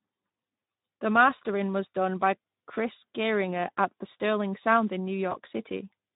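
Speech, carried throughout by the Speex codec at a rate that sounds consistent with about 11 kbps, with too few bits for the excitation, leaving the voice plainly hoarse and noisy. From 5.29 to 5.36 s, VoIP packet loss was concealed by the speech codec, consistent with a single lost 20 ms frame: the decoder extrapolates the previous sound into a brief, fading smear that lingers after the packets return.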